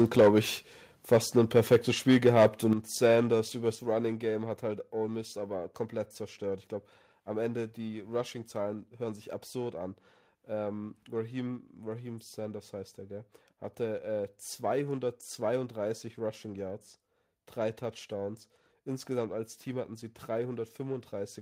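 Right from the start, 0 to 0.37 s, and again at 1.12 to 1.76 s and 2.09 to 2.46 s, the speech hits microphone overload. Peaks land about 6 dB past the converter's limit with their tops sheared flat, giving loud syllables a gritty, crackly bite, most likely from an input gain set too high. Then the microphone volume gets stepped down at 0.2 s (about 2 dB), 2.73 s (about 7 dB) and 3.75 s (about 4 dB). Each is an abrupt level drop across voice and background alike, likely the call software's automatic gain pulling the input back after those clipped peaks.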